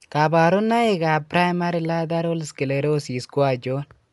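Heavy lossy coding, likely Dolby Digital compression at a starved bitrate consistent with about 64 kbps, affects the whole speech recording: the band stops sharply near 11.5 kHz, so it sounds dull, and dither-filled gaps leave a rough, fluttering noise around tonal parts.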